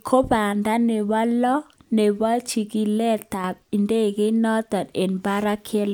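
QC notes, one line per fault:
3.34–3.44 s, sudden gain jump: between "nebo lo nebo chikilet" and "idegeit noton", speech and background noise fall together by about 6 dB at once, likely a gain change applied without a ramp; the waveform envelope steps down abruptly and the spectrogram dims uniformly.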